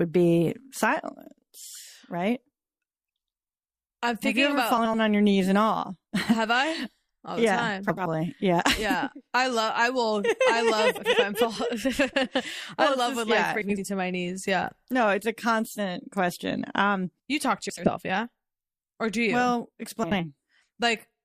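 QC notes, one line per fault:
4.77–4.95 s, 7.89–8.06 s, 10.97–11.16 s, 13.62–13.80 s, 17.69–17.90 s, 20.03–20.23 s: frames out of order. Two neighbouring 80 ms blocks play swapped, causing a garbled flutter. Unlike a dropout, nothing goes missing and timing stays intact.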